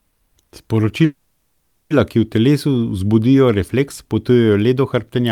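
Speech clip with a call audio freeze at 1.05–1.92 s: sound smears into a fading buzz, likely a drained jitter buffer, then resumes intact, 850 ms late, at "ki v telesu".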